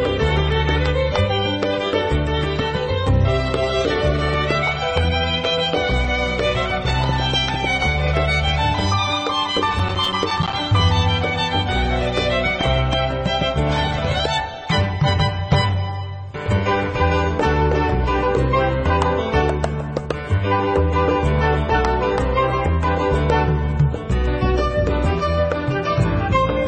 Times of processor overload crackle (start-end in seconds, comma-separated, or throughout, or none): 9.73-10.53